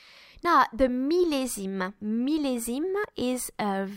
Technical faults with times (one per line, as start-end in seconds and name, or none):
2.02 dropped buffer (overrun)
3.04 dropped buffer (overrun)